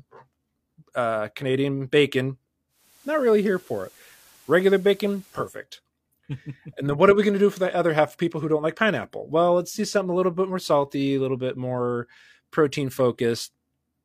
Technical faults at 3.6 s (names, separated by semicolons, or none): digital radio blending to analogue